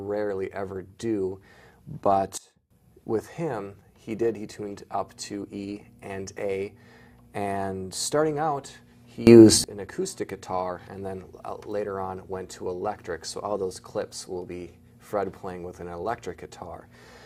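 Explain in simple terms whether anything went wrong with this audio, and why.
Twice the level abruptly snaps to a new setting and back: from 2.38 to 2.71 s everything, background included, drops to a much quieter level, and from 9.27 to 9.64 s it jumps much louder. This is a sudden gain jump, likely a volume change applied instantly instead of smoothly.

From 4.95 s to the end, a steady low buzz sits underneath, quieter than the main sound but always present. This is mains hum at 60 Hz, electricity from the power line leaking into the recording through a ground loop or nearby transformer.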